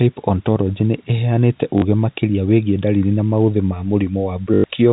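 At 1.78 to 1.82 s and 4.54 to 4.64 s, packet loss with the last packet repeated gives a robotic stutter, 40 ms then 100 ms, consistent with 20 ms packets: the waveform shows identical repeating blocks, and the spectrogram shows a pattern repeating at the 50 Hz packet rate.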